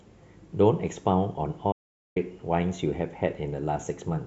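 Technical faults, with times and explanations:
1.72 to 2.16 s, audio dropout to silence: the speech cuts off mid-flow and the track falls to silence for about 0.44 s, with no room tone or noise floor underneath, then resumes just as abruptly. The input signal was likely lost briefly through a disconnected device, broken link or accidental mute while recording continued, so silence was written in place of sound and whatever was said in that span is gone.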